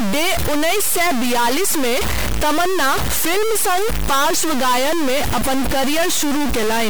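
Throughout the speech, distortion rides on the signal and pauses fill with noise instead of silence, likely from a stuck bit forcing one data bit.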